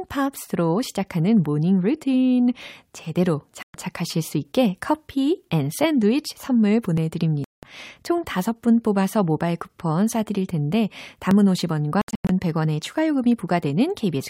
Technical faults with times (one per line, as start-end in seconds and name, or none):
0.47-13.48 clock drift buffer slips
3.63-3.74 Bluetooth dropout
7.44-7.63 Bluetooth dropout
12.01-12.29 Bluetooth dropout